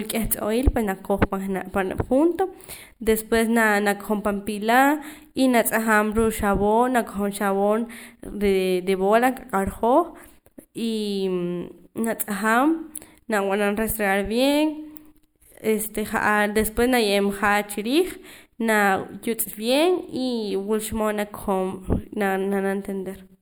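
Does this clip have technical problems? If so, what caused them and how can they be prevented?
Yes, there's channel delay (comb filtering) throughout the whole speech clip. One channel lands a tiny bit late, about 0.07 ms, under a tenth of a millisecond, which fits an offset of just a few samples. When the two are summed to mono, the shared content cancels in a notch around 7 kHz, so it sounds hollow or phasey. To prevent it, time-align the channels before the mono fold-down, or fold down from a single channel.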